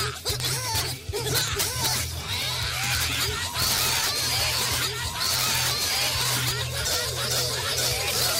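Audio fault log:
throughout integer overflow: Peaks pushed about 6 dB past the limit wrap to the opposite sign, giving harsh cracks on loud moments; the waveform shows sudden vertical sign flips, the spectrogram broadband streaks.
1.61–1.63 s skip ahead: Roughly a second of audio is dropped and the two sides are joined with no gap, so the sound lurches forward; the waveform shows an abrupt splice, the spectrogram a hard vertical seam.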